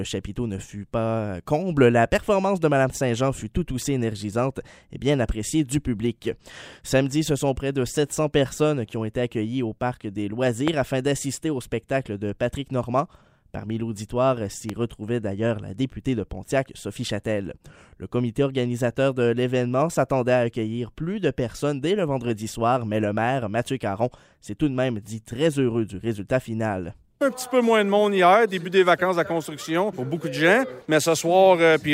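A sudden voltage step, likely from a plug, switch or static discharge, entered the chain twice, adding two loud pops on top of the audio, which carries on underneath: a sharp one from 10.68 to 10.70 s, about 15 dB above the signal, and a softer one from 14.69 to 14.72 s, about 10 dB above.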